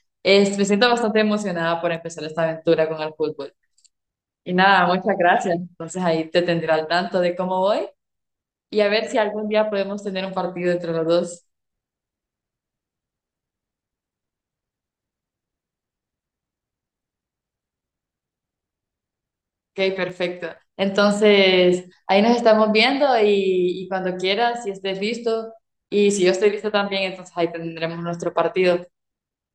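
Speech recording with two abrupt level dips of about 6 dB, at 1.97 to 2.05 s and 20.10 to 20.56 s, each recovering just as suddenly. The likely cause is one channel dropping out: with one stereo side gone, the mono sum keeps only half the shared signal.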